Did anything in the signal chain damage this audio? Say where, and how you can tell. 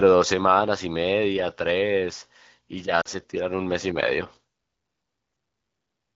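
Yes. Lost AMR speech frames on the radio link cause a short defect from 3.02 to 3.08 s. For about 40 ms, which fits two 20 ms frames, the sound fades quickly to near silence. The AMR wideband decoder is filling the gap by repeating the last good pitch and vocal tract settings at falling gain. A plain packet dropout would instead give a hard gap or a click, not this quick fade.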